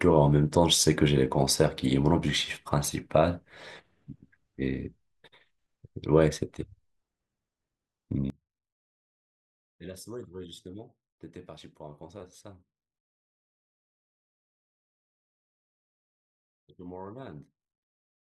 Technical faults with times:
8.30-18.36 one channel inverted

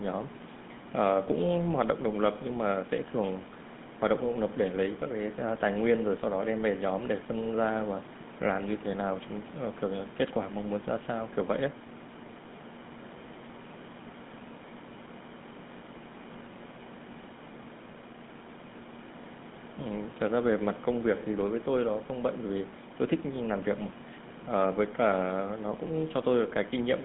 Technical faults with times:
0.00-27.05 GSM full-rate codec

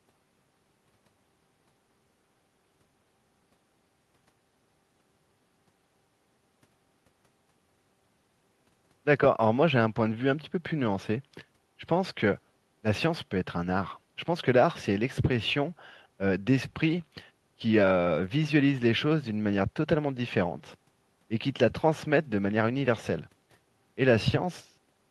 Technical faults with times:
none

